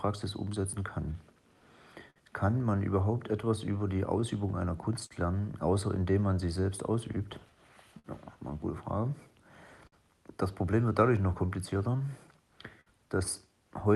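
From the start of the clip, the sender's clock runs about four percent slower than the receiver's. This is clock drift between sender and receiver: audio arrives a little slower than it is played out, so the jitter buffer keeps running low. The receiver has to compensate continuously, and that produces two further faults. On a waveform, the drift appears only as the scattered marks those faults leave, never as one clear event.

From 0.06 s to 12.33 s there are repeated timing corrections. The receiver repeats short pieces of the incoming audio to stretch it, so playback runs at about 98 percent speed. Over the stretch this adds roughly 0.3 s. Each repeat is small and unevenly spaced, so the sound has a slightly unsteady tempo with faint hiccups. On a spectrogram, some textures look subtly duplicated, with small seams but no gaps.

Five times the buffer runs completely empty, causing a short stall from a late packet. 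These stalls fall at 2.10 s (55 ms), 5.06 s (44 ms), 7.99 s (53 ms), 9.87 s (49 ms) and 12.81 s (53 ms). Each time, the last sound is held until the packet arrives, and then playback resumes with nothing lost. Each stall is heard as a brief smear with a slight buzz or dip. A spectrogram shows frozen horizontal bands at those points. The whole clip sits below 12 kHz, which fits an Opus call path.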